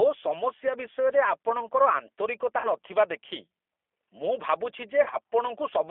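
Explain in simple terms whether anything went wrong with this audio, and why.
A couple of things went wrong. First, the whole clip went through a G.729 codec, the squeezed-down voice format a lot of internet phone calls use. It rebuilds the speech from a rough model of the voice rather than sending the real waveform, so everything sounds thin and slightly robotic, with a telephone-like band running from about 300 Hz up to 3.5 kHz. The codec roughness is easy to hear from start to finish.

Second, there are two moments of VoIP packet loss concealed by the speech codec. Around 2.58 to 2.69 s, some of the call's data never arrived. The decoder filled the gap by stretching out the last bit of sound it had, so you hear a short buzzy or noisy smear that fades instead of clean speech. The second dropout, from 5.03 to 5.18 s, is broken up differently. Small losses spread over about a tenth of a second, with the longest single gap around 30 ms, so it comes across as several brief breaks. 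In both cases the sound takes a moment to recover once the data starts arriving again.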